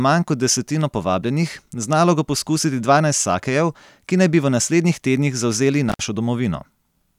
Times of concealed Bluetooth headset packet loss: none

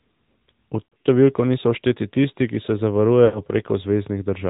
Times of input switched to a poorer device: none

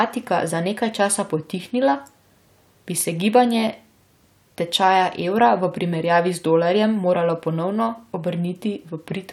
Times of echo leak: none

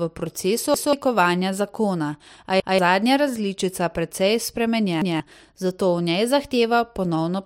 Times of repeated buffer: 0.74-0.93, 2.60-2.79, 5.02-5.20

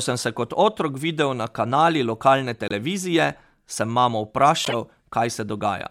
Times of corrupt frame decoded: 2.68-2.72, 4.64-4.74

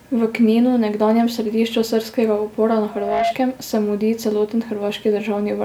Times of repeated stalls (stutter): none

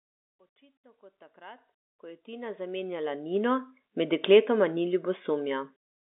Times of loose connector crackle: none

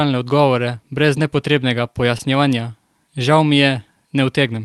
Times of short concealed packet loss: 2.17-2.21

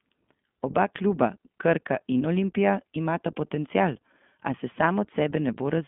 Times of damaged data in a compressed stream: none

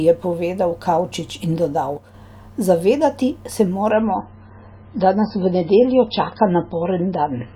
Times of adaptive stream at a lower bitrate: 3.91-7.56

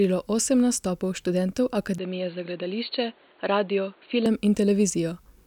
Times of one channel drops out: none

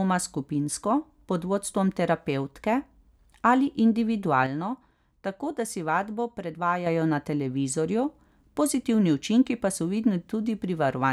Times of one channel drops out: 4.46-6.86

